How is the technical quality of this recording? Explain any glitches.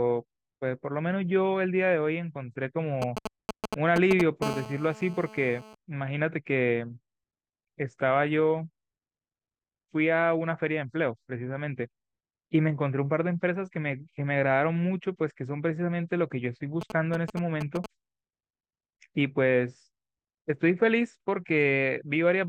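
The recording has a clear technical problem. A 2G mobile phone nearby interfered with it in three places.

From 3.02 to 4.22 s, and again from 16.81 to 17.86 s, there are GSM signalling bursts. The phone was exchanging short radio messages with the network. The audio circuit rectified those pulses into sound. You hear a galloping dit-dit-dit of brief 217 Hz buzzes. The first run is roughly as loud as the speech. The second sits somewhat below it.

From 4.42 to 5.75 s there is GSM phone buzz. Here the phone was in a call, transmitting steadily 217 times a second. The circuit demodulated each burst, producing a hard, raspy buzz at 217 Hz, rich in harmonics. It runs continuously through that stretch at about 12 dB below the speech. It has nothing to do with the speech itself.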